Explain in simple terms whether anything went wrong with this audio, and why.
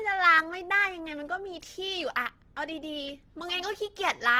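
Yes, something's off here. Across the whole speech clip there's a grainy, clearly rough texture. That's the likely mark of Opus compression squeezed hard: when the encoder runs short of data, it fills gaps with noise, which roughens the sound.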